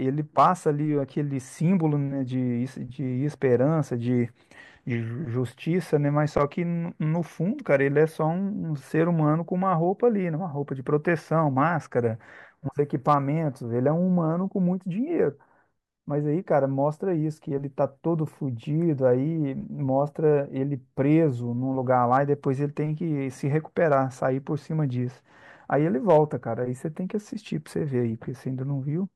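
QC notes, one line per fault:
0.38–0.48, 3.53, 6.37–6.43, 13.09–13.14, 21.91–22.17, 23.92–23.97 and 26.09–26.20 s: hard clipping. Speech peaks overran the signal path's limit by about 0 to 3 dB and were sliced flat. Each brief crackle lands only on a loud peak, unlike soft saturation's steady warmth.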